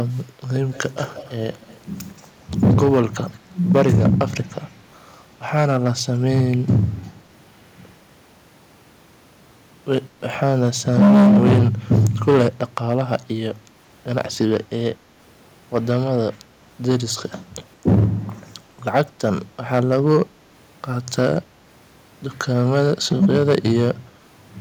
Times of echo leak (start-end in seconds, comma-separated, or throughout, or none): 0.15-0.21, 0.71-1.80, 2.17-2.22